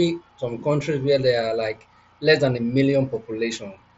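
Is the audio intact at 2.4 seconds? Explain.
Yes, the speech at 2.4 seconds is intact, passing through the Bluetooth mSBC headset codec with no fault at that moment.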